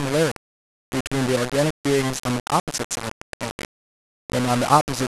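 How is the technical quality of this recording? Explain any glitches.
Poor, because of one fault across the whole speech recording. Low bit depth without dither, throughout: likely rounding to about 4 bits, leaving error that tracks the signal, so quiet passages turn gritty and sputter, with noise only about 10 dB down.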